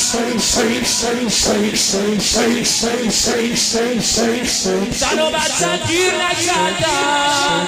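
No technical faults are audible.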